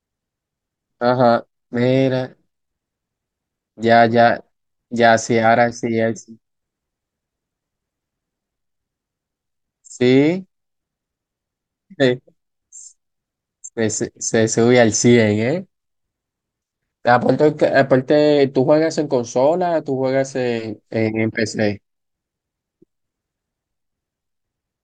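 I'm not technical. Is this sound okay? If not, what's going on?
Yes, this one's fine: there's nothing wrong to point to anywhere in the recording.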